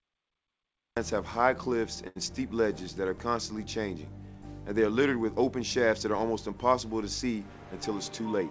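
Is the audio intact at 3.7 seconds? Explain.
Yes, at 3.7 seconds the audio is intact, with no dropout, glitch or other fault at that moment.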